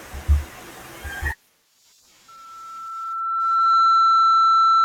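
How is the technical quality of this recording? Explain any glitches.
The recording has one serious fault. From 2.28 s until the end, loudspeaker feedback squeal takes over: the microphone is picking up its own loudspeaker, and at 1.3 kHz the loop gain exceeds one, so that tone feeds itself. It swells over roughly a second and a half to about 15 dB above the speech. That gradual self-reinforcing build at one fixed pitch distinguishes it from a steady interference whistle, which would start at full level.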